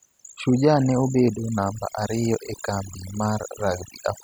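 A speech recording, with overdone noise removal running throughout. A noise reduction stage was set too strong. It pushes individual frequency bands down near its noise estimate. Between phrases the background drops and breaks up into twinkling specks.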